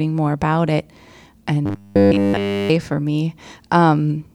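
Robotic sound from repeated short buffers, 1.66 to 2.70 s: the speech becomes a rigid 100 Hz buzz, likely from almost entirely repeating 10 ms buffers.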